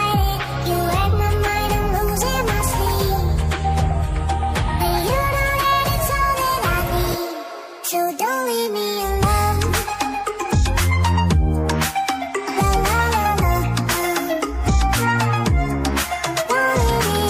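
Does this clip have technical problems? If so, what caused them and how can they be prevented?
No, no technical problems can be heard in this clip. There is nothing to trace to a cause, so no preventive step is needed.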